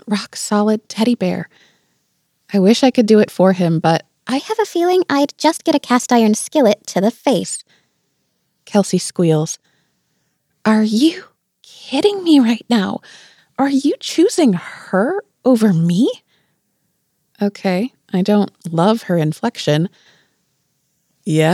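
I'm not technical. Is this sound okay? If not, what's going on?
No. From 4.39 to 7.44 seconds there is a section at the wrong speed: the sound runs 1.14 times too fast, so it turns hurried and about two semitones higher, then snaps back. Pitch and pace move together, which sets it apart from a pitch-only shift. The likely cause is playback on the wrong clock.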